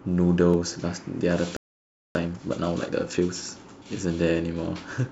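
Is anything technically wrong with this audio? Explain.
Yes, there are three related problems in this speech clip.

Around 0.54 s there's an overlap between stream segments. Two segments' timestamps collide, a sliver of audio gets trimmed, and you hear a tiny skip.

From 1.57 to 2.15 s there's a playback stall. The sound cuts out for about 0.59 s, likely because the player ran dry or got blocked.

Then from 2.15 to 3.31 s comes time-compressed catch-up. Small chunks are snipped and cross-faded to clear the backlog, so it runs about 1.5 times fast at normal pitch.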